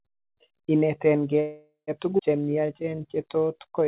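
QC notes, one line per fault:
1.40–1.90 s, call audio freeze: packets were likely held up and the jitter buffer ran empty, so the last sound is stretched into a fading buzz, then about 90 ms of silence.
2.17 s, skip ahead: a chunk of audio was dropped while later audio waited, so playback jumps forward with barely a gap, losing roughly 200 ms.
2.41–3.88 s, jitter buffer slow-down: the buffer rebuilt its reserve by repeating pitch periods, adding 171 ms, so the speech runs at 89% speed with drawn-out sounds at unchanged pitch.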